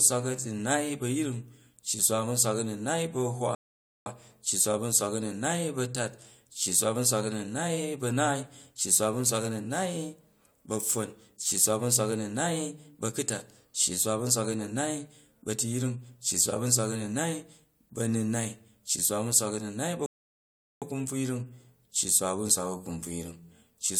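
Two rebuffering stalls occur, at 3.55 to 4.06 s and 20.06 to 20.82 s. Playback exhausts its downloaded audio, drops to silence, then resumes at the exact stopping point, resuming at "cci swa" after the first. No speech is lost; each adds dead time, about 0.51 s and 0.76 s.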